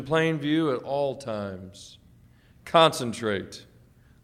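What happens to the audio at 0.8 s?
Nothing goes wrong at 0.8 s; the audio plays through that moment intact, with no dropout, click or distortion.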